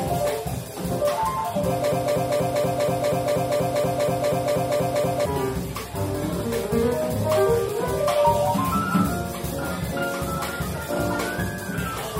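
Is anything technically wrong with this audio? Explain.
Yes. From 1.92 s to 5.25 s there is a broken-record loop. A fragment about 240 ms long plays 14 times back to back, each repeat identical, and the audio that belonged in those three seconds is lost. The player, encoder or stream likely stalled and kept resending the last fragment it held. Unlike an echo, the repeats don't fade or overlap. Unlike a dropout, the gap is filled with the loop rather than left silent.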